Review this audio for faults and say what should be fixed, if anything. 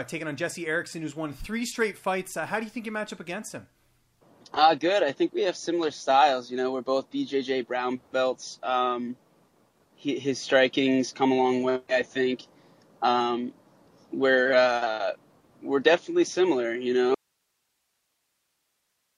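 At 17.15 s the audio drops out to a faint residue and never returns. The last 2 seconds or so hold only hiss, roughly 50 dB below the programme level. The cut is abrupt, not a fade or a natural pause. The hiss shows the chain after the break stayed live. The likely cause is a lost feed upstream, such as a loose cable or a source cutting out. To prevent this, secure connections and monitor the input through the end of each take.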